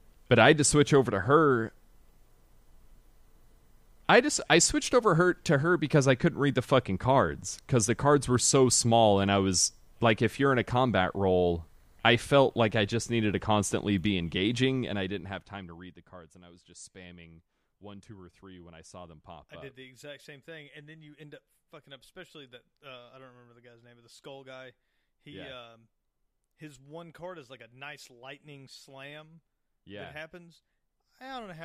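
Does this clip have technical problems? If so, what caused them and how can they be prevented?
Yes. Right after "needed to constantly be", from 14.64 to 16.06 s, a fast ticking zipper noise rides on the speech until "and I was just". The level drops by roughly 20 dB in coarse unsmoothed steps, around 30 per second, and each jump clicks. Ramping gain per sample, or smoothing it across each buffer, prevents this.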